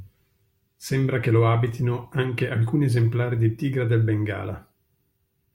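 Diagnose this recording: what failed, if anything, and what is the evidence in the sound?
Nothing failed in this recording.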